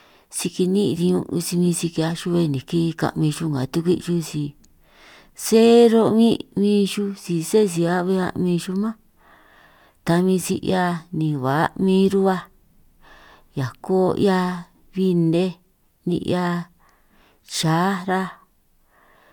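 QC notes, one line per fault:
No faults heard anywhere in the speech audio.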